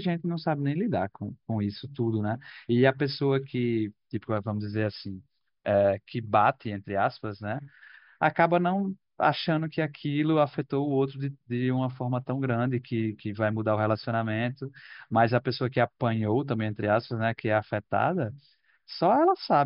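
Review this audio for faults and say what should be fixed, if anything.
No faults can be heard in this speech recording. Nothing needs to be fixed.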